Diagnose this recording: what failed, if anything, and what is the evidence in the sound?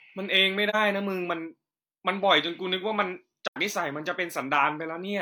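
A brief dip and a soft-edged hole drop out of the speech, at 0.69 to 0.75 s and at 3.47 to 3.57 s. The sound fades out and back in rather than cutting hard. This is AAC frame loss with muting at the codec stage. The decoder zeroed the missing frames' spectrum, and the overlapping transform windows smeared the edges. The first gap, about 43 ms, fits one lost frame; the second, about 85 ms, points to two consecutive frames.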